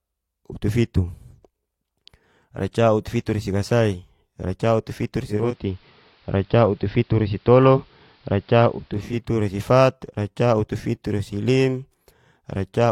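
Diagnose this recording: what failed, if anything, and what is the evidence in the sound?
Digital radio blending to analogue: the receiver lost digital reception and cross-faded to AM from 5.20 to 9.27 s, adding faint hiss and shifting level about 3 dB.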